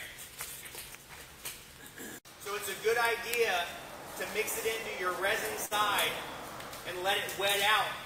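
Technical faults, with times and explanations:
5.65 to 5.73 s, burst of packet loss: the audio briefly freezes into a stretched, fading copy of the preceding sound for about 56 ms, then jumps ahead. A short run of consecutive packets went missing, the receiver extended and faded the last sound, and about 60 ms of audio never arrived.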